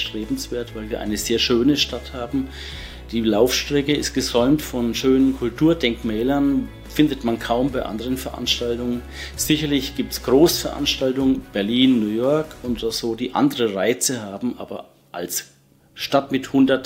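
Nothing technically wrong can be heard anywhere in this audio. The sound carries on steadily from its first moment to its last, with no audible fault at any point.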